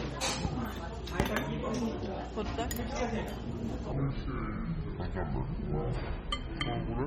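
A short sound recording, likely squeezed through heavy MP3 compression at a low bitrate that fits about 32 kbps, leaves plainly audible watery, swirling codec damage throughout. From 3.92 s to the end, a section at the wrong speed, likely from playback against the wrong clock, runs at 0.629 times normal, dropping the pitch about seven semitones so everything turns slow and deep.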